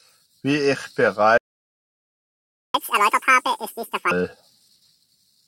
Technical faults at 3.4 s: catch-up at higher speed

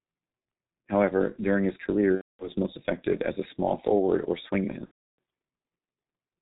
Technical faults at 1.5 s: G.723.1 codec

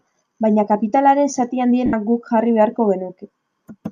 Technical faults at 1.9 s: lost LE Audio frames

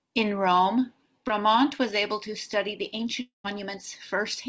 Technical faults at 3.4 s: long network dropout

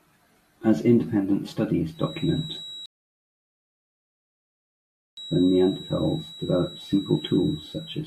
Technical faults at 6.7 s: feedback whistle

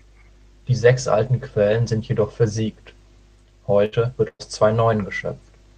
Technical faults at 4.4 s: burst of packet loss

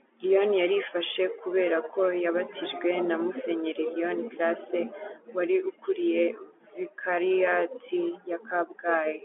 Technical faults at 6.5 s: none

